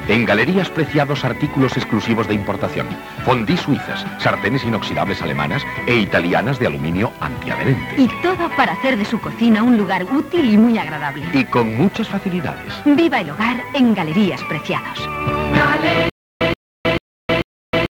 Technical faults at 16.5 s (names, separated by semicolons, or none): stutter with silent gaps